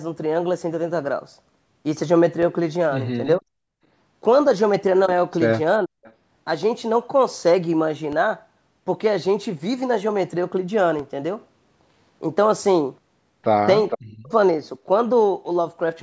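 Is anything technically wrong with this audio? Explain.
Yes. Four kinds of fault occur in this speech clip: three DC steps, one stretch of background gated by the echo canceller, two speech dips from double talk, and two bursts of echo leak.

DC step, at 2.43 s, 8.13 s and 10.99 s: at each moment the waveform's zero line suddenly shifts to a new level, as when a converter recalibrates or an offset source is switched in. The offset isn't held. A 5 Hz high-pass bleeds it away quickly. Each jump comes through as a brief low thump or click, and the speech continues unchanged underneath it.

Background gated by the echo canceller, from 3.42 to 3.82 s: while the far-end loudspeaker was active, the echo canceller pulled the microphone down hard, by as much as about 40 dB. For roughly 0.4 s the room sound falls away almost to silence. The ambience then comes back as the canceller releases its hold.

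Speech suppressed in double talk, from 5.85 to 5.98 s and from 13.96 to 14.32 s: the talker's voice suddenly drops, by something like 40 dB at its deepest. The first dip lasts about 0.15 s and the second about 0.4 s. Both sides were likely talking at the same moment. Unable to separate the near voice from the loudspeaker echo, the canceller clamped down on everything and pushed the speech under with it.

Echo leak, from 6.04 to 6.13 s and from 13.90 to 13.97 s: a short, delayed copy of the voice comes back, 448 ms late in the first case and 457 ms late in the second. The first is faint, about 30 dB below the speech. The second is nearly as loud, only about 5 dB down, and clearly audible. Each is likely the residue of a loudspeaker-side echo canceller failing to remove what its microphone picked up.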